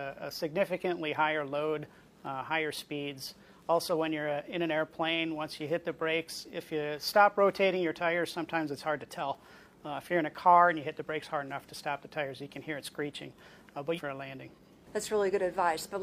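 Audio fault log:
13.94–14.00 s, stream segment skipped: the audio jumps abruptly forward with a short blip lasting about 60 ms, and what follows does not continue from what came before. The likely cause is a segment of the stream that failed to load, so the player moved straight on to the next one. On a waveform the envelope breaks with a sudden discontinuity. A spectrogram shows a thin vertical broadband line at the join, with the spectral content changing sharply on either side.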